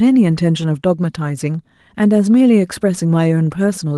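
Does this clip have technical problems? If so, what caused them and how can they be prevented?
No, the speech comes through the Opus voice compression, running at 24 kbps in hybrid mode with the full audio band kept, without any technical problem standing out.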